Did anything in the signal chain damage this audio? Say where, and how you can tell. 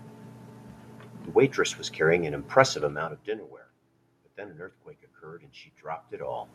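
No, nothing in the chain seems to have harmed this speech; the background noise of the room underneath belongs to the space itself, and the shifts in level around 3 seconds and again near 6 seconds are just the talker moving relative to the microphone.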